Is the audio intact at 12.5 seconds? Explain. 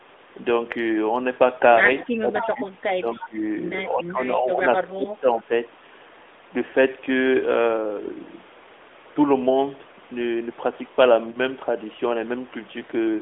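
Yes, at 12.5 seconds the speech runs on without any fault, heard through the narrow telephone band, roughly 300 Hz to 3.6 kHz, of the AMR-NB codec that carries it.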